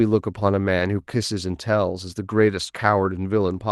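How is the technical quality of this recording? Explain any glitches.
Two short glitches occur in this speech. The audio also tops out near 12 kHz, which fits an Opus call path. Both glitches are a lost packet rebuilt from error correction, at 0.79–0.81 s and 2.29–2.31 s. Each time, the next packet carried a low-bitrate copy of the missing one. The decoder played it, so there is no gap. Instead, a 20 ms patch sounds rougher and noisier.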